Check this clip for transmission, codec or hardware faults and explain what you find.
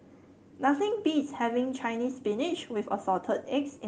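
Nothing faulty found: the speech carries only the usual coding texture and 12 kHz band limit of a normally working Opus call path.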